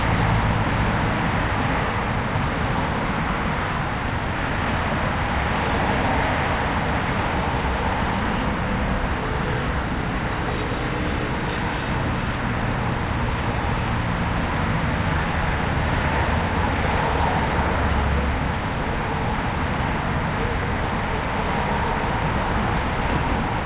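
At 3.86 to 3.88 s there is a skip ahead. With later audio already waiting, about four tenths of a second was dropped and the two sides were butted together with no fill. The sound jumps abruptly forward. On a waveform, an envelope discontinuity appears with no silent gap. On the spectrogram, the texture changes at a single vertical seam.

From 3.96 to 4.73 s comes a jitter buffer speed-up. The buffer's excess backlog is drained by repeatedly cutting short pitch-period-sized slices, roughly a tenth of a second in total. Playback runs at 113% speed without any pitch shift and sounds briefly hurried. Spectral bands keep their height but their time patterns are compressed. The band-limited call path, empty above 4 kHz, frames both faults.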